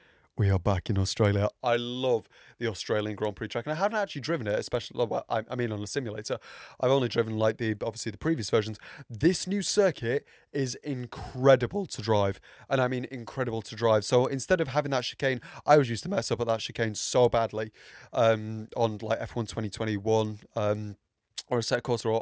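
From start to end, the speech carries a steady ticking at 4 per second: the resampler restarted on every block. Each 250 ms block was converted from 48 kHz to 16 kHz in isolation, so the filter at each block edge lacked its true neighbouring samples and left a small discontinuity. On a waveform these show as tiny steps every 250 ms; a spectrogram shows faint vertical broadband lines at that spacing, present only where the speech has energy.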